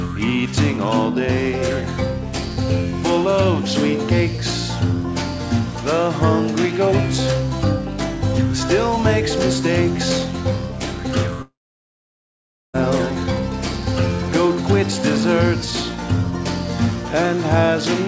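From 11.42 to 12.76 s the sound breaks into a fading buzz, then near-silence for about 1.2 s, and resumes with the middle missing, likely a long network dropout.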